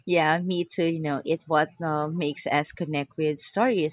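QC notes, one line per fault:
Nothing stood out as a problem on listening to the speech in this recording.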